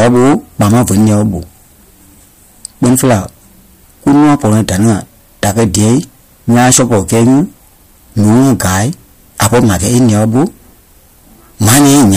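Harsh, buzzing fuzz sits on every loud syllable from start to finish, the sound of hard clipping. The speech was driven about 21 dB past what the signal path could carry, so roughly 15 percent of the samples have their peaks sliced flat, spraying high harmonics.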